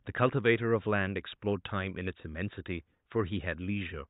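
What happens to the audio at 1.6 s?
Nothing goes wrong at 1.6 s: the speech continues intact, with only the faint room noise, about 54 dB below the speech, sitting underneath it as part of the recording.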